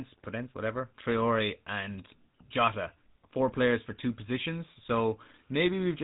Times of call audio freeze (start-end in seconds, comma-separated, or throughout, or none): none